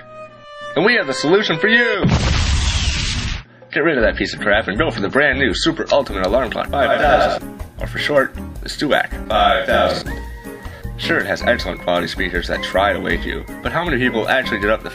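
From 0.0 to 6.0 s the audio has the sound of an adaptive stream starting at a low bitrate: nothing above 11.2 kHz, with smeared, watery codec artefacts consistent with 32 kbit/s MP3. At 6.0 s quality steps up abruptly without a gap, which fits a switch to 128 kbit/s.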